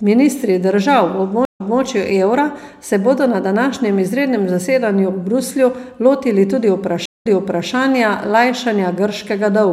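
Speech with two stream reconnects, at 1.45–1.80 s and 7.06–7.69 s: dropouts of 92 and 141 ms, then a fresh decoder resumes 261 and 496 ms earlier, showing as blank spectrogram gaps before repeated material.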